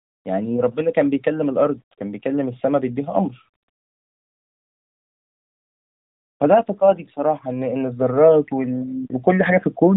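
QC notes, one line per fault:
Throughout: low bit depth without dither. Quiet speech and decays turn gritty, with grain that rises and falls with the signal instead of forming a steady hiss. The error sits roughly 50 dB below the signal and fits plain 10-bit rounding, likely from rounding without dither. A waveform zoom shows stepped plateaus on faint passages. The spectrogram shows signal-tracking speckle under the voiced bands, all capped near 3.8 kHz by the narrowband mobile path.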